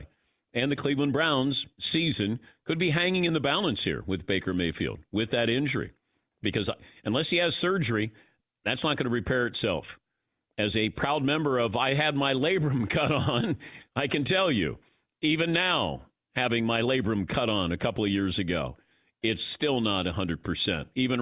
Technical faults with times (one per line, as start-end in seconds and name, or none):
none